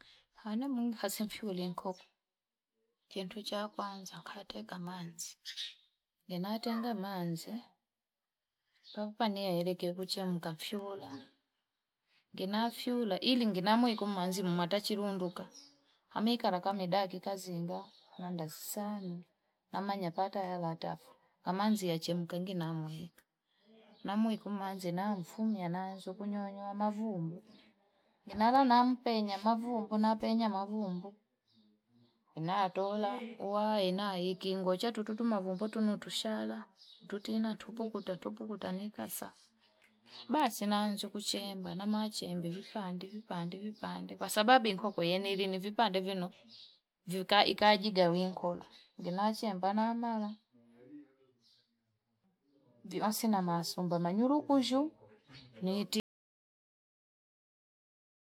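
At 56.00 s the speech cuts out abruptly into an audio dropout to silence that lasts to the end, about 2.3 s. No room tone remains, so the input was likely lost or muted while recording continued. The waveform goes flat and the spectrogram goes blank.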